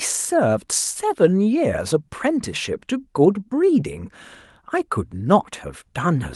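No technical faults detected anywhere in the speech recording; nothing to report.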